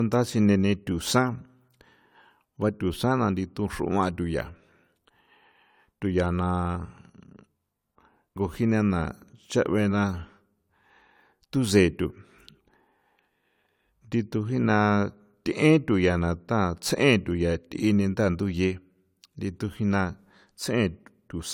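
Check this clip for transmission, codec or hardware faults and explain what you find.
One codec fault runs through the whole clip: low-bitrate audio saved at a high bitrate. From start to finish the speech carries the artefacts of a coarse lossy encoding, even though the file is a generous MP3, likely re-encoded from something near 64 kbit/s AAC. The second pass cannot restore what the first discarded, so those artefacts survive intact. Unlike a plain low-bitrate encoding, the file's high rate misleads, and content extends to about 20.1 kHz, with no early cut-off.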